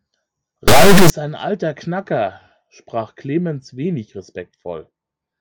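From 0.68 to 1.10 s the speech gives way to an extremely loud, harsh buzz like a clipped square wave, snapping to silence wherever the underlying sound goes quiet, and ending just before "ein alter". This is integer read as float: the samples appear to be 32-bit integers read as 32-bit floats, so each value becomes either almost zero or wildly beyond full scale, and the output slams between silence and the clipping limit.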